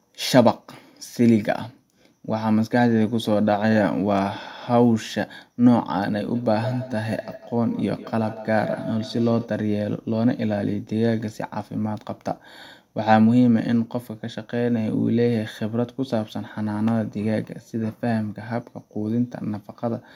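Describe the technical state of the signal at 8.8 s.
At 8.8 s the speech comes back as a thin, ringing repeat roughly every 150 ms, peaking at about 14 dB below the speech. This is feedback echo between two devices, running from 6.34 to 9.57 s. One device's microphone re-captures another device's playback, which its echo canceller cannot remove.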